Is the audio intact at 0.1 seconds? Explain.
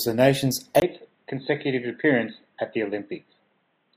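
Yes, the speech at 0.1 seconds plays through cleanly, with no dropout, click, distortion or other fault at that moment.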